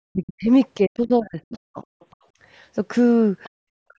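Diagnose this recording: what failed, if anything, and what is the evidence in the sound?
Speech suppressed in double talk, at 0.12–0.5 s, 0.77–1.79 s and from 3.88 s to the end: the voice sinks by about 40 dB in pieces. This is likely call-processing echo cancellation mistaking both talkers for loudspeaker echo and attenuating the near voice.

The other side's voice leaking through, at 1.85–2.16 s and briefly at 3.43–3.49 s: a faint second voice, roughly 30 to 35 dB below the talker, is audible. The likely cause is the echo canceller leaving residual loudspeaker pickup in the microphone signal.

Background gated by the echo canceller, at 3.49–3.6 s: the room sound drops by about 40 dB for roughly a tenth of a second, then returns. The call processing's suppressor clamped the microphone hard while the loudspeaker played, and released it shortly after.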